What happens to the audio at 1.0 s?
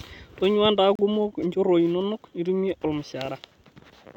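A gap between stream segments opens from 0.95 to 0.99 s, just before "kumok nchorroi inonok nitumie". At the join between two 2.0 s segments, the timestamps leave a hole of about 35 ms that the player fills with silence. The speech stops abruptly and restarts just as sharply, with hard edges on both sides of the dropout. Nothing is missing from the speech itself; the silence simply pushes everything after it 35 ms later.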